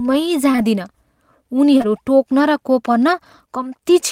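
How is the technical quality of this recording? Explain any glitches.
The speech is marred by short concealed packet loss in two places: consecutive gaps at 0.51 to 0.56 s and 0.56 to 0.60 s, then at 1.78 to 1.82 s and 1.82 to 1.86 s. Each time, about 20 ms of audio arrived too late for the decoder, which patched the hole by extending the preceding sound for roughly 20 ms before blending back into real audio. Each pair of gaps is heard as a brief smear or wobble in the speech.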